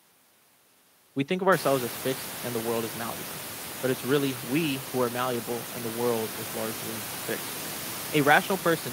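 No technical faults can be heard in this speech.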